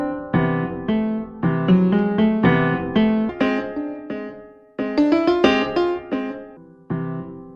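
A playback or editing stage likely ran part of the audio against the wrong clock, producing a section at the wrong speed from 3.29 s to 6.57 s. Through that stretch the material runs 1.61 times faster than it was captured, so its timing and its pitch shift together: everything rises by roughly seven semitones and events crowd closer, sounding hurried and thin. At 6.57 s the sound drops abruptly back to its proper pace and pitch.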